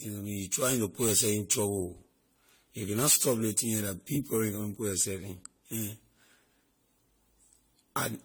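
From start to finish, the speech has most likely been through repeated lossy encoding, roughly ten generations of it, in a way that fits a 64 kbit/s AAC-LC chain. This is generation loss. Each new encode quantises the already damaged signal again on a shifted frame grid, so the coding noise and spectral gaps accumulate. The result sounds swirly and hollow, consonant onsets are smeared, and nothing remains above 20 kHz.

From 4.73 to 5.73 s, just after "la big problem you", one channel lags the other by roughly a single sample, about 0.02 ms, and the two are summed to mono. This is channel delay producing comb filtering. Content common to both channels cancels where the offset puts them in opposite phase. With a delay this short, the first notch sits up around 20 kHz, so that second of audio loses some air and sounds slightly dulled at the very top.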